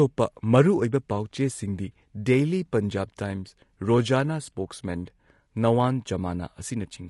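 Throughout the speech, low-delay AAC compression is plainly audible: rough, grainy voicing with noise filling the gaps between harmonics, likely from AAC-ELD at a rate that fits around 32 kbps. This codec codes about 500 frequency lines a frame with a low-delay window.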